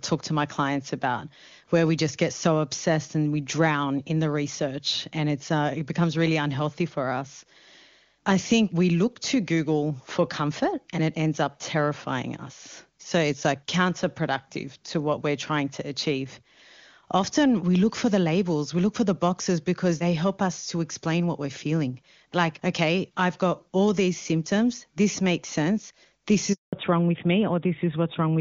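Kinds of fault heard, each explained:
Handover gap: The call was passed from one network link to another, and for 200 ms no speech frames came through while the switch happened. Starting at 26.53 s, the speech dies away within a few tens of milliseconds and stays silent until 26.73 s, when the new link begins carrying audio. Anything said inside that window is simply missing, not muffled or garbled.
Fallback to narrowband: Right after the handover, at 26.73 s, the call stepped down from HD Voice to the older narrowband codec, with the sound pointing to AMR-WB at a high rate giving way to AMR-NB at 12.2 kbit/s. From there to the end nothing above 4 kHz gets through, so the speech loses its upper band and turns duller and rougher than the clear wideband sound heard before the gap.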